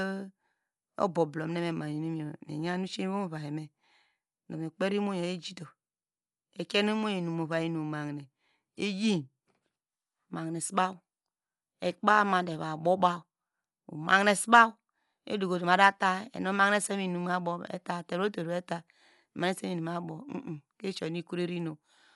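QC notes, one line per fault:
Throughout: Dolby Digital compression, likely the cause of the dull, band-limited speech with nothing above 11.4 kHz and a rough, fluttering noise around voiced tones. Sparse high lines are refilled with dither noise, which fits a low bitrate near 64 kbps. A spectrogram shows a hard ceiling and speckled, noisy upper bands.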